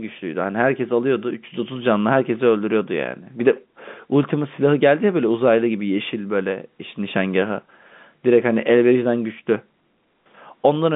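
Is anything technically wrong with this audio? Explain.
No, the narrow band of this speech, roughly 150 Hz to 3.6 kHz with nothing above 3.8 kHz, is simply what G.711 telephone coding on a phone line sounds like and is not a fault.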